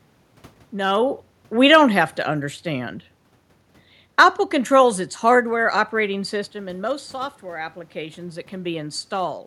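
The signal path shows no technical faults; the steady background of the room belongs to the recording itself, and the level changes about a second in and again around six and a half seconds come from the talker shifting position at the microphone.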